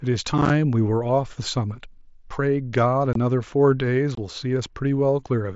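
Unconcealed Bluetooth headset packet loss punches abrupt silent holes into the speech: at 0.38 to 0.50 s, scattered gaps of up to 7.5 ms give a brief crackle, and then two 22.5 ms dropouts at 3.13 s and 4.15 s. Unlike concealed loss, nothing fills the holes, so their edges are abrupt. The 22.5 ms length fits about three lost mSBC frames, and the band is limited to 8 kHz.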